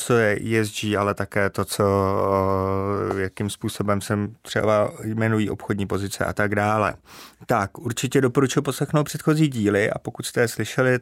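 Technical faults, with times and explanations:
3.11–3.13 s, loud pop: a single sharp pop sits on top of the speech, peaking roughly 10 dB above the surrounding level and lasting about 20 ms, while the speech continues unbroken underneath. The cause is likely a sudden voltage step or pulse entering the signal chain, such as from a connector, a switch, a static discharge or a driver glitch. The circuitry that follows shapes that pulse into the brief, percussive burst heard here.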